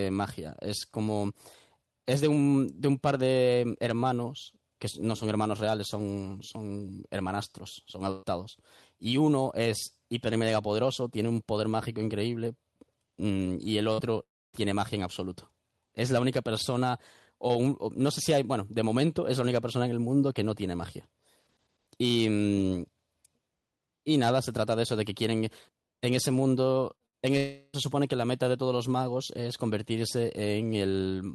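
At 8.11 to 8.26 s, a burst of packet loss cuts out about 120 ms of speech. The receiver stretches the last sound across the hole as a fading buzz or hiss, then jumps ahead. A shorter burst at 13.93 to 14.13 s removes about 60 ms the same way.

From 14.23 to 14.56 s, a long network dropout, likely a stall in delivery, drops about 300 ms. A brief fading continuation gives way to near silence before the speech returns further on.

Two more bursts of packet loss, at 26.95 to 27.03 s and 27.06 to 27.16 s, each lose about 60 ms as quick held smears.

At 27.37 to 27.76 s, a second long network dropout, likely another stall in delivery, removes about 360 ms. This time the receiver fills the whole gap with the last sound, a fading buzz or hiss that never reaches silence.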